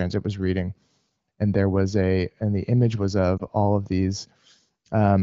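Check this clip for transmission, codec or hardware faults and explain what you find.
One transmission fault stands out. From 3.38 to 3.42 s there are lost AMR speech frames. The wideband decoder briefly rebuilds the sound from its last good pitch and spectral settings at reduced gain, giving a short dip or warble, which fits a single lost 20 ms frame. A true dropout would be silent, and this one is not.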